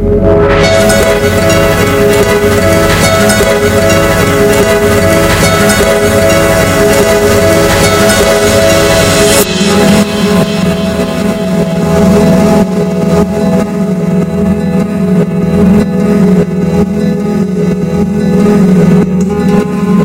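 Hard clipping runs through the whole clip: the sound is driven about 8 dB past what a stage in the chain can pass, so its peaks are sheared flat. Around a twentieth of the waveform hits that ceiling, and the squared-off tops add harsh high harmonics, heard as a gritty fuzz on every loud moment.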